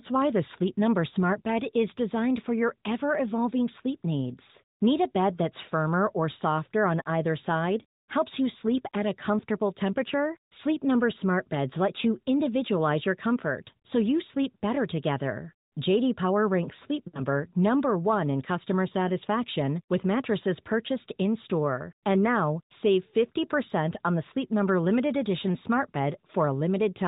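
At 17.08 to 17.22 s, lost AMR speech frames: the decoder repeats the last good frame with falling gain, so the sound is drawn out and fades; spectrogram harmonics smear and fade.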